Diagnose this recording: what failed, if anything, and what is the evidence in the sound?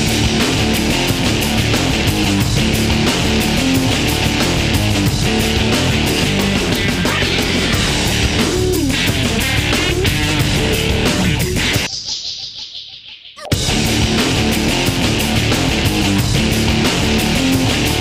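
Nothing in the signal chain shows evidence of a failure: no stage, from the analogue path through conversion and buffering to playback, leaves an audible trace of a fault anywhere in the recording.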